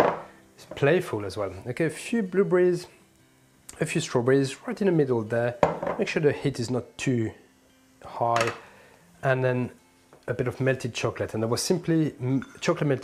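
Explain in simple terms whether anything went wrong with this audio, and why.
Nothing went wrong here: the signal stays steady and intact the whole way, with no technical problem anywhere in the recording.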